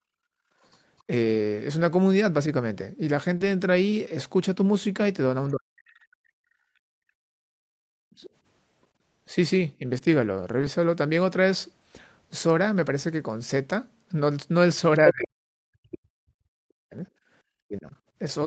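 From 0.0 to 0.6 s the background is gated by the echo canceller. The loudspeaker is playing, so the canceller pulls the microphone down hard. The room sound drops by about 26 dB for roughly half a second, then comes back.

From 0.65 to 1.02 s the other side's voice leaks through. It sits far below the talker, a faint second voice in the background. The likely cause is loudspeaker sound that the echo canceller left in the microphone signal.

From 3.37 to 3.42 s there is a short concealed packet loss. About 20 ms of audio arrived too late to decode. The receiver covered the gap by extending the previous sound for 23 ms, then blended back. It comes through as a brief smear.

From 5.51 to 6.39 s the talker's speech is suppressed in double talk. Both sides speak at once, and the near voice sinks steeply, by around 40 dB at worst. The canceller probably could not tell that voice from the echo, so it turned both down.

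From 6.67 to 7.81 s the background is gated again. The room tone falls by about 33 dB for about a second.

From 8.09 to 10.03 s the double talk returns. The voice dips in short pieces, around 30 dB at the deepest, for a few tenths of a second in total.

At 10.61 to 10.65 s a second concealed loss is bridged with 15 ms of synthesized sound. It is a quick wobble.

From 14.94 to 15.11 s the far voice leaks through at about the same level as the talker. It is clearly audible.

From 15.12 s to the end the near voice is suppressed again, by around 40 dB at worst.

At 17.22 to 17.29 s the background dips by about 14 dB in a brief gate.

Over the whole clip, nothing is heard above 8 kHz. That matches the 8 kHz bandwidth of Opus at 32 kbps on this call path.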